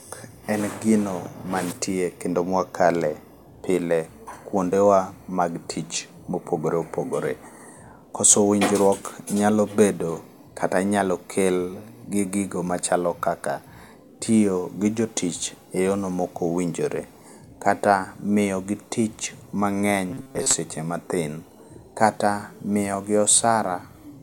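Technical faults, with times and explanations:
20.10–20.55 s, robotic sound from repeated short buffers: for nearly half a second just before "matin kata miyogi", the speech collapses into a stiff metallic buzz pinned at about 134 Hz that only loosely tracks the words. That's most likely audio arriving too slowly, with the playback filling the gaps by looping a tiny chunk of roughly 7.5 ms, one over 134 Hz. Most of the real audio in that stretch gets skipped.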